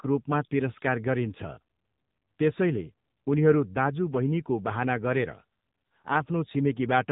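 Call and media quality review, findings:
AMR narrowband mobile codec damage, whole clip. Speech band-limited, nothing above 3.8 kHz. Plainly buzzy, synthetic texture. Likely component: AMR-NB encoder at a low mode, near 8 kbps. Too few bits per frame to model the speech source cleanly.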